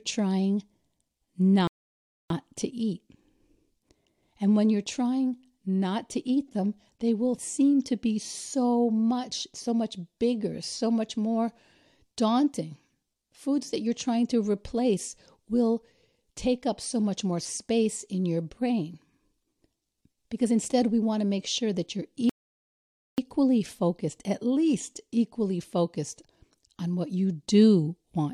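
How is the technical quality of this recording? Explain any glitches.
The speech is interrupted twice by a rebuffering stall. At 1.67 s, silence lasts 0.63 s before "to eat". At 22.29 s, it lasts 0.89 s before "focused at least equally". Playback ran out of downloaded audio and waited. It then resumed exactly where it stopped, so nothing is lost but time is added.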